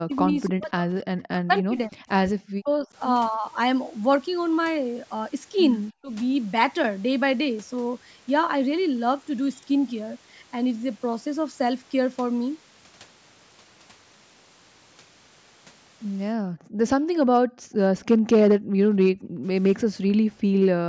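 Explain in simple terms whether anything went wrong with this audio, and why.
Three problems can be heard, all tied to the echo control of a call.

Speech suppressed in double talk: the voice drops away sharply from 0 to 2.02 s, 2.43 to 2.89 s, and more gently 5.91 to 6.11 s. The likely cause is both sides talking at once, so the echo canceller turned everything down.

Echo leak: from 3.33 to 3.38 s a faint, brief copy of the voice slips through, arriving about 0.28 s late. It is leftover loudspeaker sound that the echo canceller failed to remove, which is the likely cause.

Background gated by the echo canceller: the room sound behind the voice suddenly vanishes and comes back at 16.48 to 17.77 s, 18.16 to 18.79 s, 19.12 to 19.43 s and 20.08 to 20.6 s. The echo canceller clamped the microphone while the loudspeaker played.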